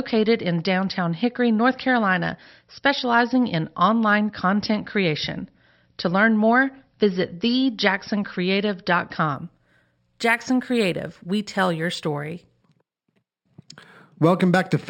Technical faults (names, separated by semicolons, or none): imaging from linear upsampling